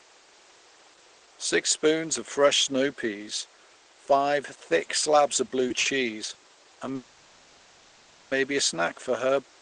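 Three short stalls from late packets come first, at 5.47 to 5.52 s just after "five thick slabs of", at 5.80 to 5.88 s, and at 6.33 to 6.38 s. Each time a packet arrived late and the jitter buffer emptied. The last sound is stretched by 20, 50 and 20 ms, with a slight buzz or dip, and nothing is lost.

A call audio freeze then runs from 6.95 to 8.34 s, just before "a snack for her". Packets were likely held up in transit. The final sound carries on as a fading buzzy hiss for 1.36 s, never dropping to full silence. The audio then resumes where it stopped.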